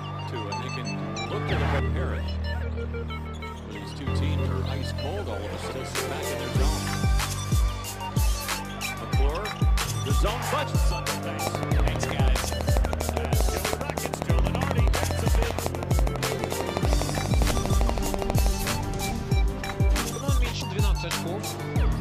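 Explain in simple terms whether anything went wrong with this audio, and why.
Dropped buffers (overruns) at 4.46, 6.08, 16.39, 17.51 and 20.62 s: each is a point where the sound jumps ahead by a twentieth to about a seventh of a second, likely because the recording software fell behind and lost those samples.

A train of clicks from 11.47 to 18.47 s: about a hundred steady ticks, roughly 12 each second, likely from an electrical pulse.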